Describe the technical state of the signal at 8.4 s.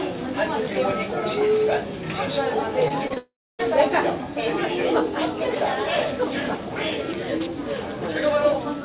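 At 8.4 s the sound is intact, with no dropout, glitch or distortion, and the band stops at about 4 kHz, as expected from the working telephone-grade call path it passes through.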